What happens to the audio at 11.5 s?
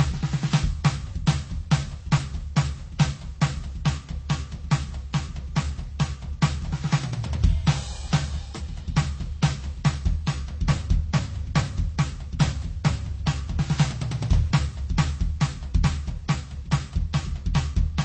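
Nothing changes specifically at 11.5 s; the music there carries the same damage heard across the whole clip. The top end stops at about 8.7 kHz, and the remaining band carries the artefacts of several codecs, all layered together. This is likely transcoding between lossy codecs: the music appears to have passed through MP3, then Vorbis, then HE-AAC, all at low bitrates. Each stage spent bits on the previous stage's artefacts and added its own, while the lowest cut-off in the chain carried through.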